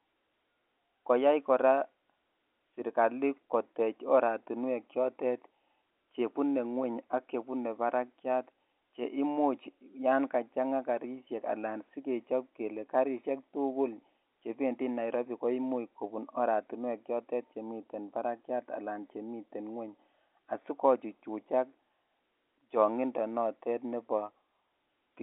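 Speech over a telephone-band path, 64 kbps G.711 A-law with the band running from about 150 Hz to 3.6 kHz and nothing above 3.8 kHz; no faults to report.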